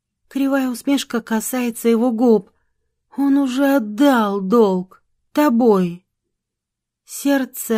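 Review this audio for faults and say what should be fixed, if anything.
Nothing here needs fixing; I heard no faults anywhere in the audio, so it can stay as it is.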